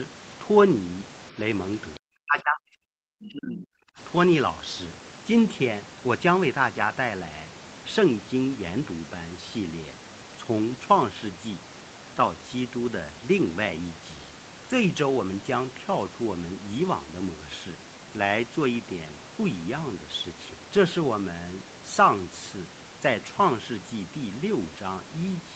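Speech suppressed in double talk, from 1.98 to 3.99 s: the speech sinks sharply for about two seconds, at its deepest by roughly 40 dB. The likely cause is an echo canceller that, while both sides spoke, could not tell this talker from loudspeaker echo and turned everything down.

Lost packet rebuilt from error correction, from 6.77 to 6.87 s: about 60 ms of speech turns briefly rough and noisy without any gap. Missing Opus packets were replaced by the lower-quality copies carried in the packets that followed, which fits three lost packets.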